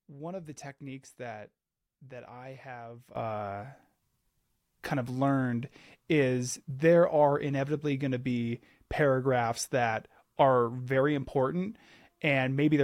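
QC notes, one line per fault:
3.16 to 12.83 s, sudden gain jump. Right after "that that I have", the level rises by about 12 dB in a single step. It stays there to the end of the clip. The speech and the background noise get louder together, so the noise floor lifts along with the voice. There is no fade between the two levels. The likely cause is a digital gain setting applied at once, with no ramp from one sample to the next.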